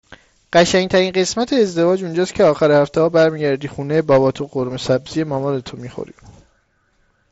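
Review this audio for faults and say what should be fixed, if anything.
No faults turned up in reviewing this speech audio, so nothing needs to be fixed.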